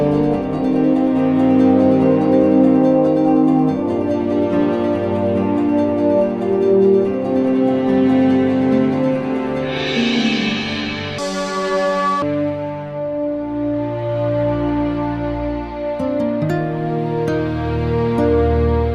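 A section at the wrong speed runs from 11.18 to 12.22 s. For that second, the audio plays at 1.95 times its proper rate, so it rushes past and jumps upward in pitch by roughly ten semitones, sounding thin and chipmunk-like before snapping back to normal. Because speed and pitch rise together, the cause is likely a playback or editing stage clocking that stretch against the wrong rate, nearly doubling it.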